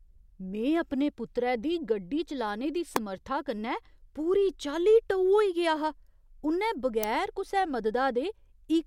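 Speech carrying two electrical switching spikes: sharp snaps at 2.96 s, between "दी गड्डी चलाने दी" and "समर्था कन्नै", and again at 7.04 s, each peaking at about -10 dBFS. They are most likely arcs from a nearby switch, motor or static discharge picked up by the audio line. Unlike a digital dropout, the speech underneath carries on without a gap; the snap is simply added on top.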